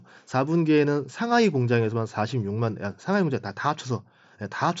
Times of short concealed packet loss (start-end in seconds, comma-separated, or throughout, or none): none